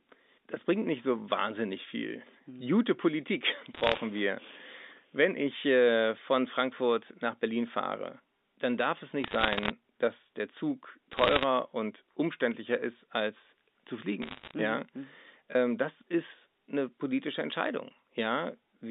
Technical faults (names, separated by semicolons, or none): bit errors on a digital phone line